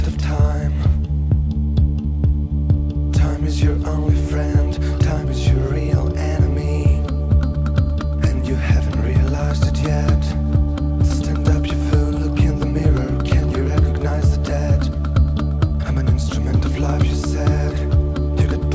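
No technical faults can be heard anywhere in the clip. It has come through a call path whose content stops at 8 kHz, which fits a wideband codec such as G.722 running at around 64 kbps.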